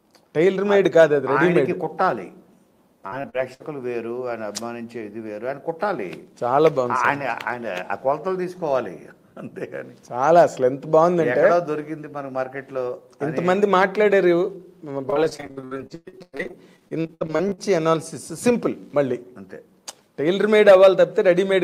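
At 3.07–3.62 s and again at 15.10–17.59 s, repeated packet loss produces robotic, choppy sound: missing stretches, up to about 60 ms and 120 ms, are patched by repeating prior audio, showing as smeared, striped spectrogram blocks.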